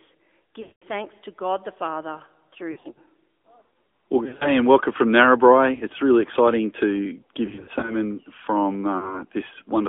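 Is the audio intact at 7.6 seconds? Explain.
No. Between 7.46 and 7.97 s there are lost AMR speech frames: eight 20 ms frames (160 ms in total) fail across roughly 360 ms, with no run longer than 40 ms. The decoder fills each gap by repeating the last good pitch and vocal-tract settings at falling gain, so the sound dips and warbles briefly instead of dropping to hard silence or clicking as a plain packet gap would. This happens over the AMR narrowband mobile codec present throughout. It limits the band to about 250 Hz to 3.6 kHz and makes the speech plainly buzzy at a rate consistent with 10.2 kbps, a steady coloration, not momentary breakup.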